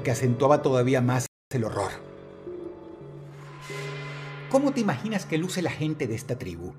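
At 1.26 s the sound cuts out completely and stays silent for about 250 ms, resuming at 1.51 s. This is a playback stall. The gap lands in mid-flow rather than at a natural pause, so it reads as a dropout rather than a pause in the material. The likely cause is the player running short of buffered data, or its output thread being held up, so nothing reached the output for that quarter of a second.

From 1.51 s to 4.01 s the audio runs faster than normal, at 1.1 times speed, while its pitch stays where it should be. This is time-compressed catch-up: having fallen behind during the stall, the player trims its backlog by removing short slices of audio and cross-fading across the joins. The result sounds slightly rushed until normal pacing returns at 4.01 s.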